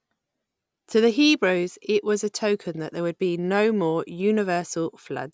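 No technical faults can be heard anywhere in the recording.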